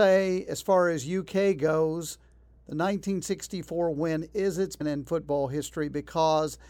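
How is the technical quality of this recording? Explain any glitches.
There is one glitch. At 4.80 s, just after "win is its", there is damaged data in the compressed stream: corrupted bytes make the decoder misread the frame and lose sync until it finds the next valid header, producing a brief glitch in the speech.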